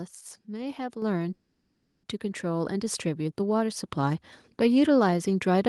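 A speech recording with two kinds of fault. The first is a microphone volume stepped up, three times. At 1.02 s the level jumps by about 6 dB. At 2.75 s and 3.77 s it rises again, by about 2 dB each time. Each change is instant. The voice and the background noise get louder together, which shows the input gain itself was raised. The second fault is a call audio freeze from 1.33 to 2.06 s. For about 0.7 s the last sound is stretched into a fading buzz or hiss, with only a very brief silence. Then the speech resumes where it stopped. Nothing is lost, but everything after it now arrives about 0.7 s late. The likely cause is delayed packets that left the jitter buffer empty.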